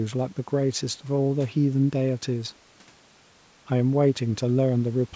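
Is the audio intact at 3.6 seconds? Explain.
Yes, the speech at 3.6 seconds is intact, with only the normal call microphone processing at work, which thins out the lowest bass and carries nothing above 8 kHz.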